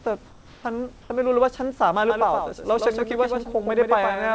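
Comfort noise in place of the background appears from 0.26 to 0.64 s and again from 1.02 to 1.10 s. The real room background, about 28 dB below the loudest speech, drops out and is replaced by a flat, featureless hiss about 2 dB quieter, likely because discontinuous transmission halted sending during pauses and the receiver synthesised filler noise.

A doubled audio track begins abruptly at 2.10 s and runs to the end: a second full-band copy trails roughly a tenth of a second behind, a few decibels quieter, with no reverberant decay, likely from the audio being captured twice along paths of different delay. Both copies share the call path's ceiling, with nothing above 8 kHz, which fits G.722 wideband coding.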